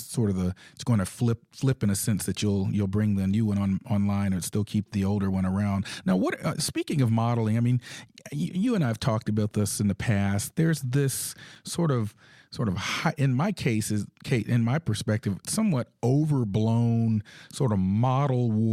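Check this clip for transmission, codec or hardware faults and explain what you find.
One transmission fault is present in this speech clip: a gap between stream segments at 11.55 s. It sounds like a sharp, hard-edged dropout lasting about 5 ms, a tiny hole that interrupts the speech without any fade. It comes from the boundary between two 6-second delivery segments, where the timestamps don't quite meet. The player fills the 5.1 ms shortfall with silence, so nothing is actually lost from the speech, but the timeline gains a brief, abrupt pause.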